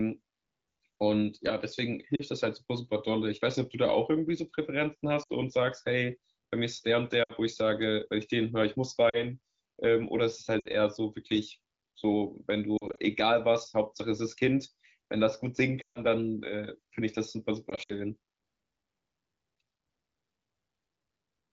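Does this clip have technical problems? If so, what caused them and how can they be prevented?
Yes: lost AMR speech frames at 2.16, 5.23, 7.24, 9.09, 10.6, 12.77, 15.81 and 17.69 s. Radio errors corrupted the frames, so the decoder repeated the last good settings with fading gain. You hear brief drops to near silence, and the longest gap is around 15.81 s. Better radio coverage or stronger channel error protection would prevent it.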